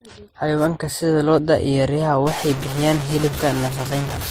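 From the start the speech has a stacked, smeary quality and nothing above 15.7 kHz, which points to transcoding between lossy codecs, likely an MP3, then HE-AAC, then Opus chain. Each pass re-encoded the previous one's artefacts, so you hear several flavours of swirl and mush layered together.

Then from 2.27 s right to the end, low bit depth without dither kicks in: the signal sounds truncated to something like 4 bits, and the rounding error tracks the speech, giving a coarse, gritty distortion sitting only about 10 dB under it. Quiet stretches sputter or drop out between steps.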